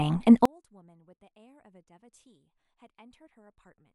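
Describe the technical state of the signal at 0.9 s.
At 0.9 s the speech has shrunk to a faint residue about 37 dB down, from 0.45 s to the end. The likely cause is one channel inverted, so the shared centre content cancels in a mono sum. Unlike a dropout, a trace remains.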